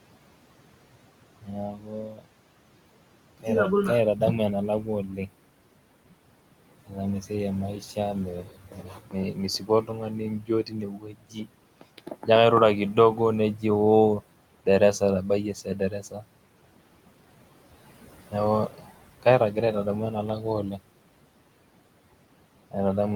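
Throughout the speech there are noise suppressor artifacts. The room noise, about 16 dB below the voice, is pushed down by about 18 dB in the gaps and comes back up under the voice, so the background pumps with the speech instead of sitting at a steady level.

Speech is cut by the noise suppressor at 1.42–2.26, 4.83–5.29, 6.84–12.28, 12.94–13.64, 14.65–16.24 and 18.31–19.56 s. The suppressor takes quiet parts of the speech for noise and turns them down with the background, by up to about 19 dB at 1.42 s and 6.84 s and only about 8 dB at 4.83 s and 12.94 s. The longest stretch, from 6.84 to 12.28 s, loses roughly two seconds of speech in total. Soft sounds and endings fade or go missing while the louder speech around them stays intact, which separates this from a dropout, where everything drops out at once.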